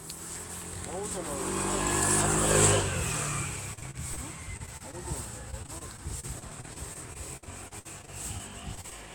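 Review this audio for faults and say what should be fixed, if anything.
Repeated packet loss (robotic sound) occurs at 3.73–4.19 s, 4.57–4.95 s and 5.51–8.93 s. Short dropouts up to 58 ms are patched by extending the preceding sound, leaving choppy fragments with pieces missing. To prevent it, use a more stable network path and a larger jitter buffer.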